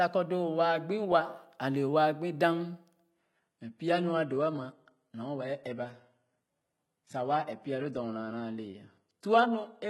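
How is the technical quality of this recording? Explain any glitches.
The recording starts clean, then quality drops for the rest of the clip. From 3.11 s to the end, an adaptive stream at a lower bitrate takes over. The connection slowed, so the player switched versions with no gap. The change is sudden. Nothing remains above 11.8 kHz, and codec artefacts rise. This fits a fall from roughly 96 to 16 kbit/s.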